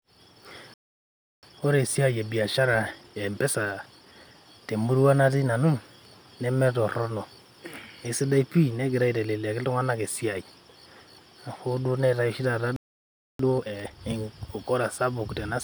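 At 0.74 s the speech cuts to silence for about 0.69 s, resuming at 1.43 s; a second gap of about 0.63 s runs from 12.76 s to 13.39 s. Each is a playback stall: the player likely ran short of buffered data or had its output thread held up, so nothing reached the output until it recovered and carried on from the point where it had stopped.

Straight after each gap the speech sounds rushed but keeps its normal pitch. From 1.43 s to 4.43 s it runs at about 1.15 times normal speed, and from 13.39 s to 14.01 s at double speed, so the second stretch is clearly hurried. This is time-compressed catch-up: to reduce the backlog the stall left behind, the player removes short slices of audio and cross-fades the joins, which shortens the material without shifting its pitch.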